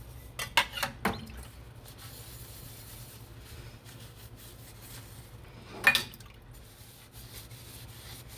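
No technical faults can be heard in this recording of sounds. Nothing stands out at any point in the audio.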